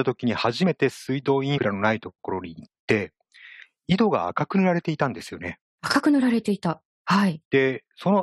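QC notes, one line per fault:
1.57–1.59 s and 6.00 s, damaged data in a compressed stream: two short glitches cutting through the speech. Corrupted bytes in the stream made the decoder misread those frames, lose sync and hunt for the next valid header, so you get a brief glitch.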